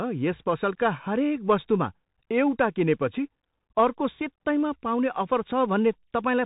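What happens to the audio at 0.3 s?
At 0.3 s the speech is under the Bluetooth CVSD headset codec, which runs through the whole clip. Each sample is coded as a single up-or-down step of adaptive size, which fits a 64 kbps link. Everything above 3.8 kHz is gone, and the damage is plainly audible as granular hiss and gritty distortion.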